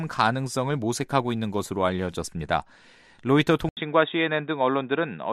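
At 3.69 s the sound cuts out for about 80 ms, then returns narrower and duller through to the end at 5.32 s. Nothing comes through above roughly 3.8 kHz, the level sits around 5 dB lower, and a faint new background noise appears well beneath the signal. This points to the input having switched to a poorer device, likely a lower-grade microphone or a headset call profile, with its own restricted bandwidth, gain and noise floor.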